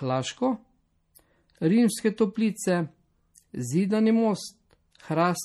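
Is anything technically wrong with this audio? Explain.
Yes. The speech carries MP3 compression damage from start to finish, and it's plainly audible. There's a watery, swirly quality on sibilants. That's likely down to an MP3 encode at a low bitrate, something around 48 kbps. At that rate the encoder runs short of bits, so it lets weak frequency components blink on and off between frames, and consonant attacks smear.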